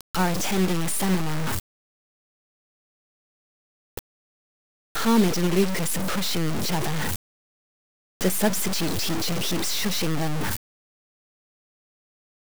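From start to finish, the audio carries a heavy, grainy distortion. It tracks the sound closely and changes as the sound changes. Quiet passages turn harsh and gritty. The faintest parts sputter or fall to silence. The cause is likely low bit depth without dither. The signal was cut down to a few coarse steps, which fits a 3-bit signal. Values appear to have been truncated, not rounded. The resulting error is almost as loud as the sound itself.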